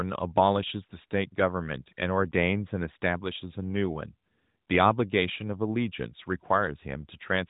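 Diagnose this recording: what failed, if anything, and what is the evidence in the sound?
Nothing failed here.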